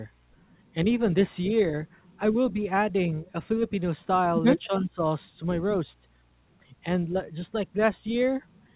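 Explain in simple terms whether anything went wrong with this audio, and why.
The speech briefly dips at 2.52 to 2.56 s, 3.23 to 3.29 s, and most deeply from 4.65 to 5.02 s. This is likely speech suppressed in double talk, where the call's echo canceller turns the talker down while both sides speak at once.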